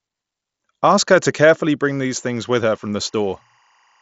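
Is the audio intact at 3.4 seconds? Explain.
No. At 3.4 seconds a faint, steady chirping warble sits behind the speech, flipping between two pitches near 1 kHz and 2 kHz, roughly 40 dB below the voice. This is timecode bleed, present from 1.84 s through the end of the clip. Linear timecode running at 24 frames per second has leaked in from a neighbouring track or cable. Its square-wave signal alternates between those two frequencies, which produces the chirp.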